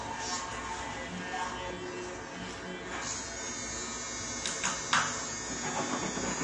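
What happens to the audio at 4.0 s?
At 4.0 s, as across the whole clip, nothing sounds above 9.7 kHz and the audio is plainly smeared and warbly. The likely cause is AAC compression at a low bitrate, around 32 kbps, where coarse quantisation leaves spectral holes, unlike a clean low-pass filter.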